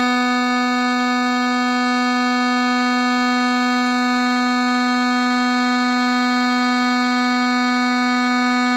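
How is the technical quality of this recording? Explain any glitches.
Listening to this music recording, nothing stood out as a technical problem.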